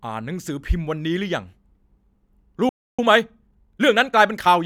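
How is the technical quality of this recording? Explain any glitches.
The recording has two linked glitches in the second half.

At 2.69 s the speech cuts out mid-flow. Silence lasts about 0.29 s, to 2.99 s. Then the speech resumes. This is a playback stall. The likely cause is the player running short of data, or its audio thread being held up. With nothing to send to the output, it falls silent. It picks up again once it recovers.

From 2.99 s to 4.63 s comes time-compressed catch-up. The player is clearing the backlog the stall built up. It trims tiny slices from the audio and cross-fades across the joins. The speech runs about 1.1 times faster than normal. The pitch stays where it was. The result sounds slightly hurried.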